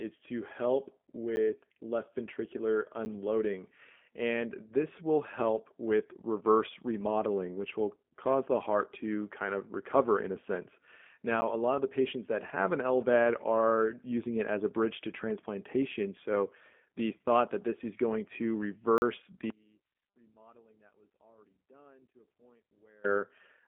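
Speech heard through the G.729 codec, a low-rate telephone coding that sounds like G.729A at about 8 kbit/s: the line band sits roughly between 200 Hz and 3.5 kHz, and nothing survives above 3.7 kHz. The speech is rebuilt from a vocal tract model with a pitch predictor and sparse pulses in 10 ms frames, so it sounds rough and plainly synthetic. On a spectrogram the energy stops at a hard ceiling near 3.7 kHz, with smeared, blocky harmonics below it. There are also four blocks of digital silence. Three last 10 ms, at 1.36 s, at 3.05 s just after "left ventricular", and at 11.41 s just before "a lot of the". The fourth runs 40 ms, from 18.98 to 19.02 s, right after "this is going to". Each is a hard cut to silence and back with no fade, so the short ones are heard as ticks and the longer one as a short hole. On the waveform each shows as a flat line, and on a spectrogram as a blank vertical strip. 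An output buffer that was not filled in time is a likely cause.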